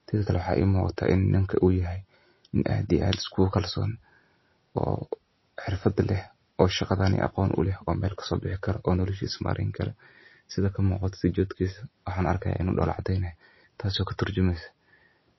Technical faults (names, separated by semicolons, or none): MP3 compression